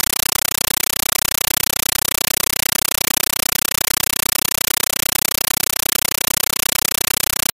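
From start to finish, what you hear is a compressed stream played as audio: an AC-3 bitstream, likely around 448 kbps, fed out as raw samples without decoding. Each frame gives a 9.33 ms burst of noise then silence, 31.25 times a second, so it's loud, chattering static throughout.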